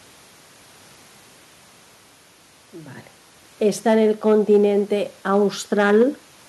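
Hard clipping hits from 3.88 to 4.64 s, overdriven by about 3 dB, then 5.73 to 6.03 s by about 5 dB: flattened peaks giving crackle on the peaks.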